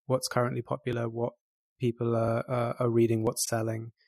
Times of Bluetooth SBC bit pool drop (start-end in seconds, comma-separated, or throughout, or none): none